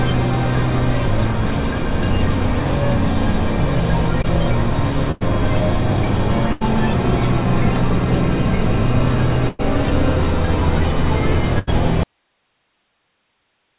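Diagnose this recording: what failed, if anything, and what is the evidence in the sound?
Network stage, short concealed packet loss. At 4.22 to 4.26 s there is a brief smear. About 20 ms of audio never arrived. The decoder's concealment extended the preceding sound to bridge it, then blended back into the real signal.

Network stage, burst of packet loss. Four longer holes occur at 5.12 to 5.23, 6.53 to 6.63, 9.49 to 9.61 and 11.59 to 11.69 s. Each lost 80 to 100 ms. Concealment held the last sound as a decaying buzz or hiss, then the audio resumed further on.

Analogue or capture stage, audio dropout to a faint residue. At 12.03 s the signal cuts out abruptly and never returns. Only hiss remains, about 50 dB below the earlier level. The path stayed live, so the source was likely disconnected upstream. The hiss stays within the call codec's band, which ends at 4 kHz.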